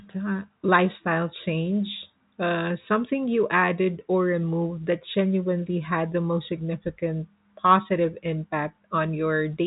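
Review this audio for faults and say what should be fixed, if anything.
Nothing needs to be fixed in this speech audio, as the review turns up no faults.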